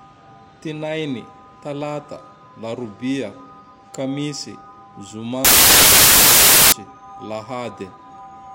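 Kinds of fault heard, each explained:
Samples built from the wrong bytes: from 5.45 to 6.72 s the speech turns into loud, harsh broadband noise, because each sample's bytes are combined in the wrong order or alignment, so the rapidly varying low bits dominate every value.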